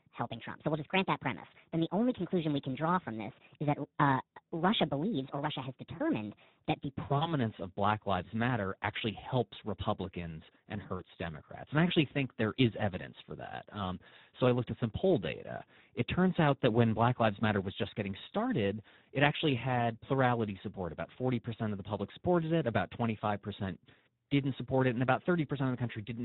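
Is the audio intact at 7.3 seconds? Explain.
No. Between 7.17 and 7.34 s the audio shows VoIP packet loss concealed by the speech codec. The gap in the stream is about 40 ms, which fits two lost 20 ms frames. The decoder filled it by repeating its last pitch and spectral envelope at decreasing gain, so the speech is briefly stretched into a fading sound. Because each decoded frame depends on the one before, the speech stays weak and smeared for tens of milliseconds or more after the stream resumes at about 7.34 s.

The moment is also affected by the Speex codec, which runs through the whole speech clip. The damage is plainly audible and fits a low setting of around 11 kbps, which leaves few bits for the excitation signal. The result is a noisy, hoarse quality. Any content above 8 kHz is only shaped noise fill rather than real detail, so around 7.3 s the concealment artefact sits on top of an already coarse, band-limited rendering.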